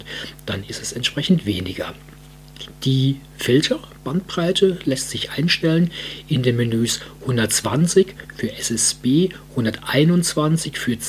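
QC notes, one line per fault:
No faults were heard. Nothing in the clip needs a timed entry.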